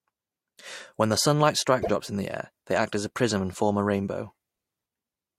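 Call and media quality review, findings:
Speech skips ahead at 1.81–1.89 s: brief glitch, about 74 ms, roughly three 24 ms frames. Likely a broken MP3 bit reservoir; after a cut, frames fetch borrowed bits from the wrong frame. Waveform: abrupt discontinuity.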